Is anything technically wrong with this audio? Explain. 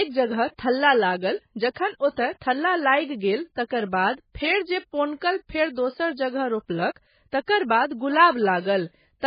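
Yes. Throughout, the speech has no content above 5 kHz and sounds watery and swirly, likely from heavy MP3 compression at a very low bitrate, around 16 kbps.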